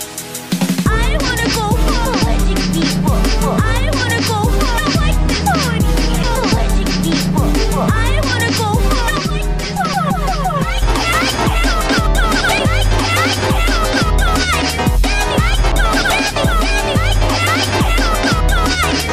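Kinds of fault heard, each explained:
CD skip at 6.23, 12.59 and 15.72 s: each is a brief tick where the player mutes for only a few milliseconds, then picks up from a different point on the disc. A jolt or a flaw on the surface knocked the laser off its track onto a neighbouring turn of the spiral, so the sound resumes abruptly out of sequence rather than continuing smoothly, and the break is audible as a small discontinuity.
Channel delay (comb filtering) from 9.19 to 10.83 s: for this stretch the sound turns hollow and phasey because one channel runs late by roughly 5 ms and is then summed with the other into mono. Content common to both channels cancels at evenly spaced frequencies, starting around 100 Hz and repeating up the spectrum, which cuts fixed notches into the tone and gives it that thin, comb-like colouring.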